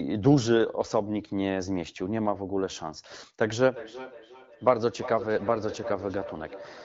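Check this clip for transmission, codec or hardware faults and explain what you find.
One fault stands out: a feedback echo between two devices, running from 3.63 s to the end of the clip at 6.84 s. The speech comes back as a fainter copy roughly every 400 ms, peaking at about 13 dB below the speech itself, heard through the light coding of AMR wideband (HD Voice) at 12.65 kbit/s. A second device in the same room is playing out this call, and the first microphone picks that playback up again. Each device's echo canceller only removes its own output, so the returned sound passes straight through.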